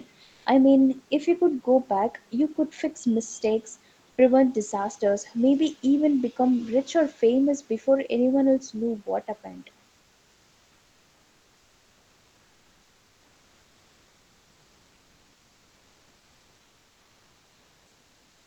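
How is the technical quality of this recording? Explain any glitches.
One glitch occurs, in speech that stops at 8 kHz, as a call path would. From 0.25 to 0.43 s there's comfort noise in place of the background: a flat, featureless hiss at the same level, likely filled in by Opus DTX.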